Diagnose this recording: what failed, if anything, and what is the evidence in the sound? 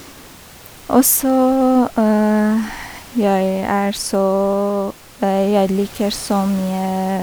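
Nothing failed: apart from the speech there is only the room's own background noise, about 23 dB below it, which belongs to the recording rather than to any stage of the system.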